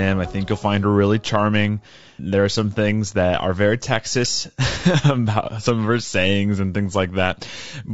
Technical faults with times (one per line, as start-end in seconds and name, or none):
0.00-7.93 low-delay AAC compression